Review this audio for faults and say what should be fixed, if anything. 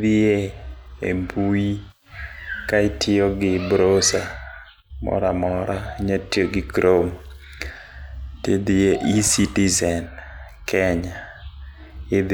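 No faults can be heard in the speech. Nothing needs to be fixed.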